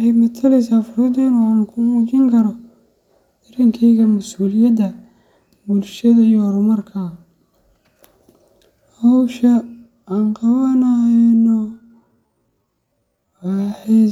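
From 11.12 s to the end, a time-stretched section slows the speech to 0.61 times its pace, likely software stretching to fit a length. It drags, yet the pitch stays unchanged, unlike a slowed tape or playback-speed error.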